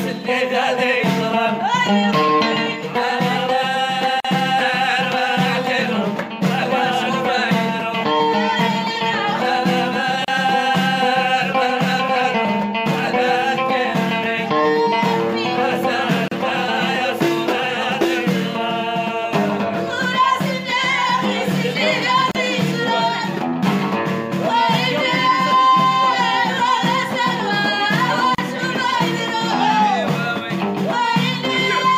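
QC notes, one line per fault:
4.20 s, 10.25 s, 16.28 s, 22.31 s and 28.35 s: gap at a join of encoded pieces. A short silence cuts into continuous sound roughly every 6 seconds. The first gap lasts about 44 ms and the others about 34 ms. Each has its edges smeared by the codec, so the silent part is shorter. The sound then resumes where it left off. This fits pieces encoded separately and joined untrimmed, so each piece's encoder start delay and final-frame padding remain as silence.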